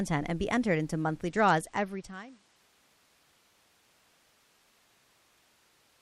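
From 1.25 to 2.56 s, a Bluetooth SBC bit pool drop dulls the treble and adds gritty noise. This fits the bit pool falling from 28 to 10, near 84 kbps.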